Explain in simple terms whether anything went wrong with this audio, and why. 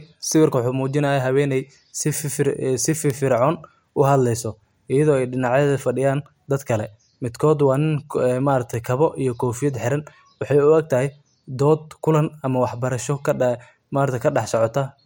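Something went wrong twice in the digital handling of this speech. Each time a bit error spike occurred: a single binary digit in one sample flipped, so that one value suddenly jumped by a power-of-two step and then snapped back on the very next sample. You hear each one as a brief, sharp tick that has nothing to do with the voice, once at 3.10 seconds and again at 8.74 seconds.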